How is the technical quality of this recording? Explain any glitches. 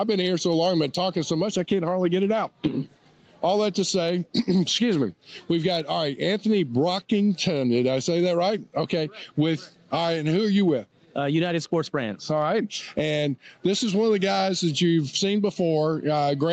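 The recording has one fault, audible for its full length: gain pumping. The top end stops at 8 kHz, which fits a wideband call codec such as Opus at a modest bitrate.

Gain pumping runs throughout, with the gain swinging by around 15 dB. The likely cause is gain set far too high feeding a fast limiter. Unlike a noise gate, it turns the level down rather than cutting it to silence.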